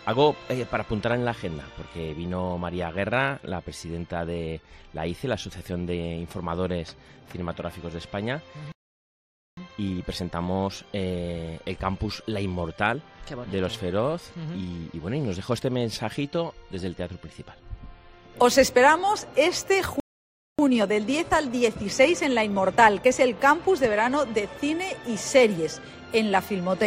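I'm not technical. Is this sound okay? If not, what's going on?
No, it has two problems, each happening twice. At 8.72 s the sound goes silent for about 0.85 s, and at 20.0 s for about 0.59 s: a playback stall, likely the player running out of data or getting held up. Right after each gap, from 9.57 to 12.57 s and from 20.59 to 23.59 s, comes time-compressed catch-up. The player trims tiny bits to make up lost time, so the audio plays 1.1 times faster at the same pitch.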